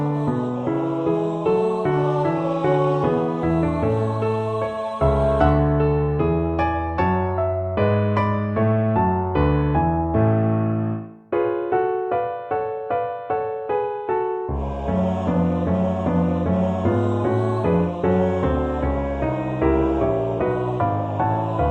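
No audible technical fault is present anywhere in the recording.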